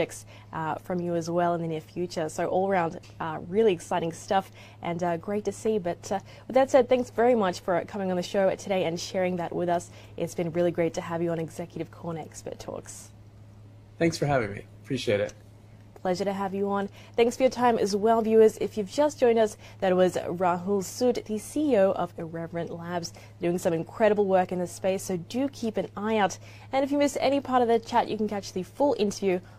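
Nothing stood out as a technical problem on listening to this audio.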